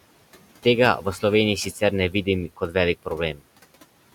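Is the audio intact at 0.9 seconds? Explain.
No. At 0.9 seconds the noise suppressor artifacts are present, as they are throughout the clip. The suppressor judges which frequency bands hold steady noise and turns them down frame by frame, here by about 18 dB. The room noise, about 19 dB below the speech, sinks in the gaps and comes back up under the speech.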